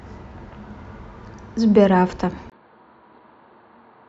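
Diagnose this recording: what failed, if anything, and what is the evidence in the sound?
At 2.50 s the speech changes character and stays that way to the end. A gap of about 20 ms comes first. After it, nothing is heard above 4.5 kHz, so the sound turns dull and boxy. The level drops by about 5 dB, and a new, faint noise floor sits well under the speech. The failure is at the device and driver stage. The input was likely switched to a poorer device, with its narrower band, its own tone and its own noise.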